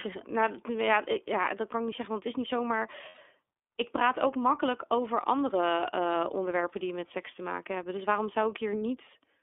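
This speech recording passed through the iLBC codec, a narrowband VoIP coder that handles each frame on its own. The roughly 30 ms framing and the plainly audible coding damage fit its 13.33 kbps mode. The line band runs from about 300 Hz to 3.5 kHz, so everything above is gone and the low end is thinned. Throughout, the voice sounds muffled, slightly rough and synthetic. From 3.09 to 3.19 s, lost iLBC frames break the stream, and about 90 ms of audio never arrives, which points to three consecutive 30 ms frames. The decoder fills the hole by repeating the last pitch cycle blended with noise. That gap comes out as a brief held, buzzy-breathy vowel. Because each iLBC frame decodes independently, the voice snaps back to normal coded quality right after 3.19 s.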